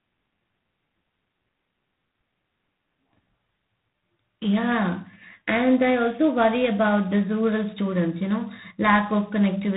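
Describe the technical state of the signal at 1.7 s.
Tandem speech coding is present at 1.7 s, as it is for the entire clip. The speech has passed through two low-rate speech coders in sequence, which fits a chain like G.726 at 24 kbit/s into a telephone link and back into G.726, with each coder reworking the previous one's errors. At this point the speech sounds rough and noisy, and nothing reaches above 3.8 kHz.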